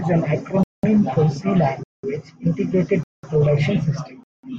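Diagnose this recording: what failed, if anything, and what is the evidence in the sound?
The speech is broken by a gap between chunks, pointing to the chunked delivery or playback stage. Silent holes of 200 ms sit at 0.63–0.83, 1.83–2.03, 3.03–3.23 and 4.23–4.43 s, one every 1.2 s: a 1.0 s chunk of sound, then dead air before the next. Nothing is missing, only pushed later. On a waveform these are flat silent stretches with abrupt edges; a spectrogram shows blank full-height vertical bands at those times.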